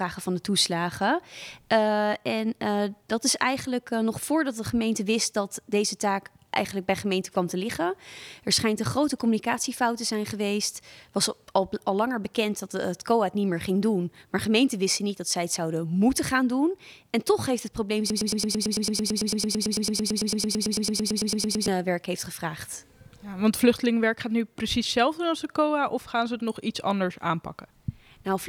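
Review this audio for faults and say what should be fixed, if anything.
A broken-record loop runs from 18.10 to 21.68 s: a fragment about 0.11 s long repeats exactly, back to back, 32 times, and whatever audio belonged in that span is gone. The likely cause is a player, encoder or stream stalling and resending its last buffered piece. On a waveform the span shows an identical block copied end to end; a spectrogram shows the same pattern stamped every 0.11 s. Watchdog checks that flush and resync the buffer on a stall would prevent it.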